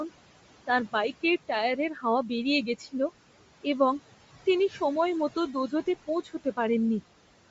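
From the start, there are noise suppressor artifacts. The room noise sits about 15 dB under the speech, and the suppressor pulls it down by roughly 17 dB whenever nobody's talking. Then it lets it back up under each phrase, so the background pumps in and out with the speech.

Running underneath all of that is a coded, band-limited sound that's most likely Bluetooth LC3 compression. There's nothing above about 7.7 kHz, and the top end that is there sounds grainy and breathy, like noise standing in for real detail. The damage is plainly audible. That fits a fairly low bitrate, somewhere around 32 kbps, with the codec's 10 ms frames.

You can also hear speech cut by the noise suppressor four times, where it mistook bits of speech for background and turned them down with it. From 1.94 to 2.04 s, right after "তাঁর বাইকের টায়ারের", the sound drops by up to about 10 dB and gets swallowed. Between 2.78 and 2.94 s there's a dip of about 13 dB. 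From 4.69 to 4.8 s, just after "এবং তিনি", it goes faint by about 9 dB. The deepest one is somewhere between 6.24 and 6.58 s, where it dips by about 15 dB. In each case roughly a tenth of a second ends up muffled or missing.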